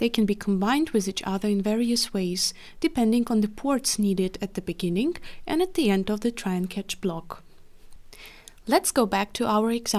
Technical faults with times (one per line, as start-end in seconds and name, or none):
none